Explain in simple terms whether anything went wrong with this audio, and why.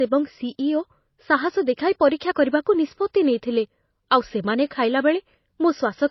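Yes. From start to finish the speech sounds dull, with nothing above 5.8 kHz. This is likely low-bitrate audio saved at a high bitrate: unlike a simple treble cut, the compression artefacts remain, because re-saving the file couldn't restore what was lost.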